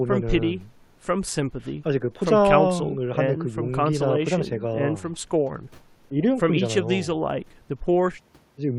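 No technical faults can be heard anywhere in this recording. There is nothing in it to mark with a time or trace back to a cause.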